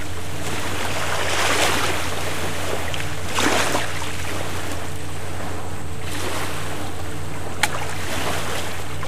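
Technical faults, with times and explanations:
Throughout, DC offset: nothing audible as such, but the entire waveform sits shifted from zero by a fixed bias of about -21 dBFS. This shows as constant energy at 0 Hz and uses up headroom, so peaks on one side approach clipping sooner.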